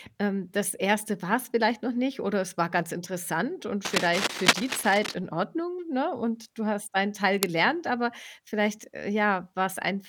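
From 3.85 to 5.15 s, then 7.34 to 7.50 s, cable scratch noise rustles over the speech, first roughly as loud, then somewhat quieter. Likely a worn, DC-carrying connector moved, jumping its contact resistance. Spectrograms show ragged broadband streaks; waveforms, dense uneven spikes.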